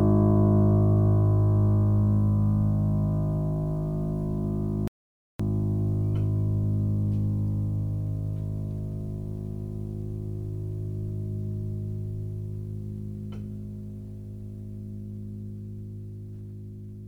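At 4.88 s the music cuts out abruptly. An audio dropout to silence follows, lasting about 0.52 s until it returns at 5.40 s. The gap holds silence, with no room tone. The input signal was likely lost while recording continued writing zeros.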